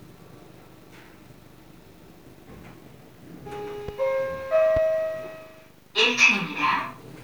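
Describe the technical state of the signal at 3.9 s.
There's a loud pop from 3.88 to 3.91 s, a single sharp hit a few dB above the sound, most likely a brief voltage spike from a plug, switch or static.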